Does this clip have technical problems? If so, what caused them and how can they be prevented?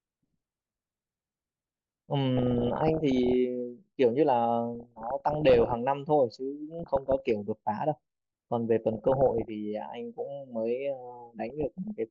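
Yes. DAB burbling runs through the speech at 2.37–3.34, 4.75–5.74, 6.79–7.30, 8.93–9.48 and 11.48–11.90 s. Weak reception let bit errors, up to around one percent, slip past error correction. They corrupted MP2 audio samples, putting short blips of noise in single sub-bands. Stronger reception, through a better antenna or placement, prevents it.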